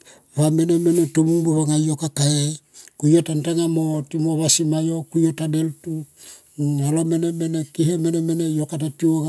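No technical faults can be heard anywhere in this speech recording. There is nothing in the audio that calls for a timestamp or further comment.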